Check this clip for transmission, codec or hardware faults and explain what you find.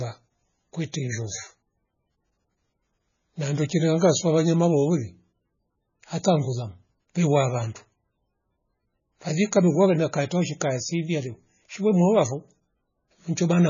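There is one fault, running through the whole recording. The speech sounds watery and swirly, with nothing above 7 kHz and smeared attacks. This is likely MP3 compression at a very low bitrate, around 15 kbps, where the encoder trims the treble and switches weak frequency lines on and off between frames.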